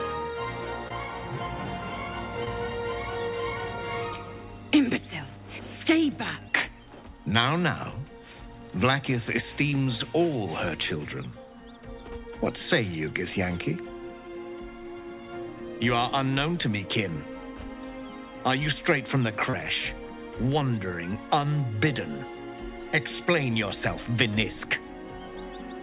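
Short concealed packet loss hits first at 0.88–0.91 s: a few hundredths of a second never arrived, so the receiver patched the gap by extending the preceding sound, leaving a brief smear or wobble. From 1.58 to 6.48 s, mains hum sits underneath as a steady 50 Hz drone, roughly 15 dB below the signal, likely from a ground loop or nearby transformer. More concealed losses follow at 2.45–2.47 s, 9.70–9.73 s and 19.50–19.54 s, each the same quick smear as the receiver bridges the missing audio.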